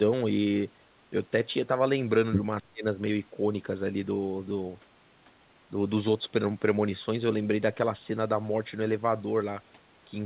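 From 2.59 to 2.85 s the speech drops sharply, by around 25 dB at its deepest, for roughly a third of a second. It sounds like a sudden gap or fade, with the talker pushed far back. This is likely speech suppressed in double talk. The echo canceller could not tell the local talker from the far side's echo and turned everything down. The band stops at 4 kHz throughout, which fits a G.711 A-law call path at 64 kbps.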